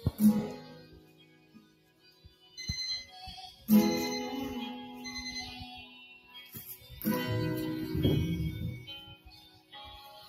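A noise suppressor built for speech runs across the whole clip, with the sound's level swinging by around 15 dB. It treats steady, sustained material and decaying tails as background noise and pulls them down, while sharp onsets slip through. The result is a pumping, thinning quality. Unlike a compressor, which reacts to loudness, this gain follows how steady the sound is, so quiet transients survive and held sound sinks.

The first cases of sound cut by the noise suppressor come at 0.61 to 2.57 s, dropping by about 14 dB, and at 3.52 to 3.68 s, about 6 dB. Further cuts follow at 5.87 to 6.55 s (about 12 dB), 6.76 to 6.91 s (about 7 dB), 9.09 to 9.75 s (about 14 dB) and 9.97 to 10.28 s (about 6 dB). Each time, the suppressor treats the sound as noise and pulls it down. A dropout, by contrast, would silence everything abruptly.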